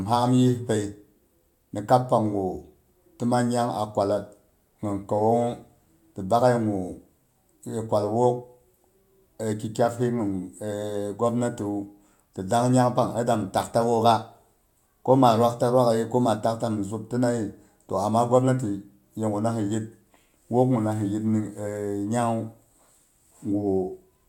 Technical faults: none

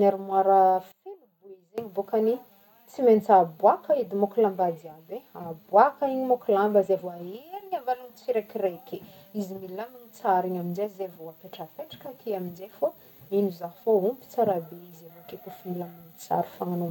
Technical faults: one channel inverted

